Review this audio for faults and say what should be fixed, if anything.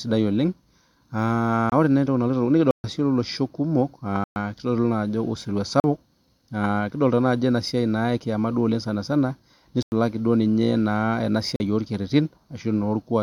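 Block of digital silence appears six times in this speech: 1.70–1.72 s, 2.71–2.84 s, 4.24–4.36 s, 5.80–5.84 s, 9.83–9.92 s (just before "duo ninye"), and 11.56–11.60 s. Each is a hole of 23 to 131 ms where the sound cuts out without any fade. The shorter gaps sound like brief holes and the longer ones like brief dropouts. A waveform shows flat silent stretches with abrupt edges, and a spectrogram shows blank vertical stripes bordered by thin broadband lines. This points to output buffers not being filled in time. To prevent it, enlarge the audio buffer or give the processing thread enough priority that every block is delivered before its deadline.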